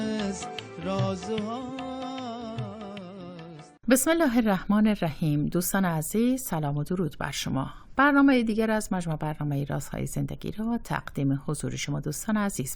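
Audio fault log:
Nothing stood out on listening to this audio.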